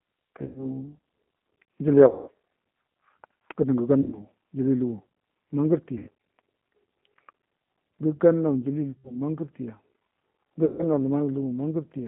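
The whole clip runs through a G.729 codec at 8 kbit/s. It keeps only about 150 Hz to 3.4 kHz. The speech is rebuilt from a filter, a pitch predictor and a few pulses. The codec damage is plainly audible as a rough, synthetic edge.

VoIP packet loss concealed by the speech codec hits at 0.45 to 0.66 s, 2.08 to 2.29 s, 4.02 to 4.19 s, 5.98 to 6.08 s, 8.91 to 9.16 s and 10.65 to 10.84 s. The third falls between "gədə ngə" and "ujili lugu". Each gap fits roughly 90 to 190 ms of lost packets. The decoder stretches its last sound into a fading buzz or coloured noise, and the speech stays weak just after.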